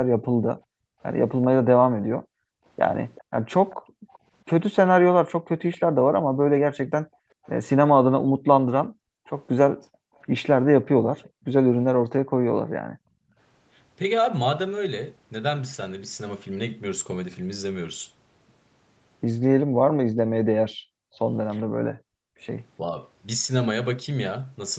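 A speech recording from a call with three echo-canceller problems. The background is gated by the echo canceller from 0.04 to 4.12 s, 6.04 to 13.37 s and 19.67 to 22.39 s. The room sound drops by up to about 40 dB for roughly 2, 3 and 1.5 seconds in total, while the speech itself stays intact. That is what separates it from double-talk suppression. A faint delayed copy of the voice, an echo leak, is heard at 3.15 to 4.18 s, 5.72 to 5.78 s, 7.44 to 7.49 s and 9.26 to 11.44 s. It lags by 387 to 409 ms, a discrete repeat rather than room reverberation, likely residual loudspeaker sound the far-end canceller failed to remove. Speech suppressed in double talk appears at 22.82 to 22.98 s, where the talker's voice dips slightly for a brief moment, likely because the canceller treated overlapping speech as echo.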